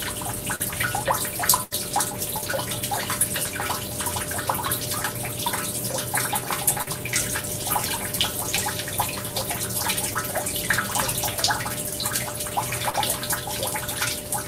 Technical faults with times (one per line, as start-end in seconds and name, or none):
0.55-0.60 short concealed packet loss
1.63-1.73 burst of packet loss
6.82-6.88 short concealed packet loss
10.14-10.16 short concealed packet loss
12.90-12.95 short concealed packet loss